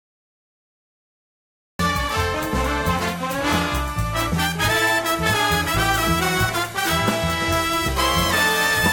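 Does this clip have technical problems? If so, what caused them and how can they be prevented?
Yes: a cut-off start. The music begins abruptly at 1.79 s after digital silence, mid-sound, because recording started late; the waveform shows a flat line, then a sheer edge. Start recording before playback begins and leave a pre-roll.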